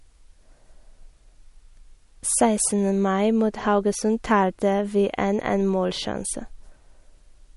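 Throughout the speech there is a watery, swirling quality, and nothing sounds above 11.2 kHz. This is likely MP3 compression at a low bitrate, around 48 kbps: the encoder cuts the treble and drops weak frequency lines that flicker between frames.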